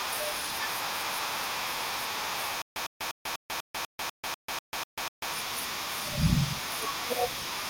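Stutter with silent gaps runs from 2.62 to 5.33 s. The same 104 ms burst of speech repeats 11 times, each followed by 142 ms of digital silence, giving an even 246 ms cycle and a choppy, stuck-record rhythm. The likely cause is a stalled player or stream that replayed its last buffered fragment on every retry and then ran dry, so the speech that belonged in that span never plays.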